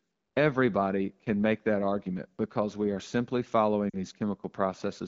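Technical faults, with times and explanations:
3.90–3.96 s, lost AMR speech frames: after "because we are simply", a 40 ms smeared fade rather than a clean silent gap, as the decoder repeats the last good frame at falling gain.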